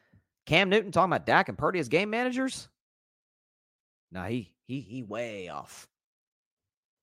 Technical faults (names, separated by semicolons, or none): none